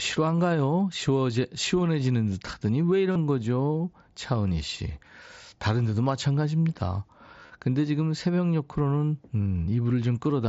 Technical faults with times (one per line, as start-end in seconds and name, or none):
3.12-3.16 concealed Bluetooth headset packet loss
7.41-7.50 concealed Bluetooth headset packet loss